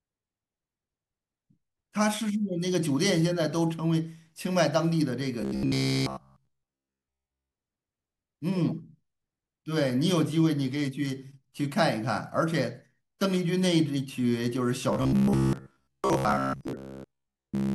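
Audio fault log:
5.42–7.56 s and 14.93 s to the end: robotic sound from repeated short buffers. The speech collapses into a rigid metallic buzz at a fixed 66.8 Hz while loosely tracking the words, with most of the real audio missing. This is likely a 15 ms block being replayed whenever fresh audio arrives late.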